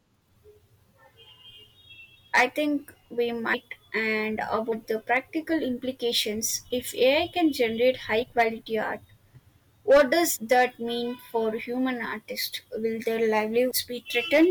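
Compressed frames skipped at 3.53–3.55 s, 4.71 s, 8.21–8.23 s, 10.35–10.37 s and 13.70 s. Missing or rejected frames make the speech jump ahead by roughly one to several frames.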